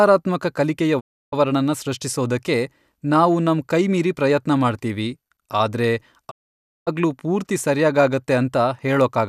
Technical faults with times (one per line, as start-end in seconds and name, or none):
0.99-1.34 digital broadcast dropout
6.29-6.89 digital broadcast dropout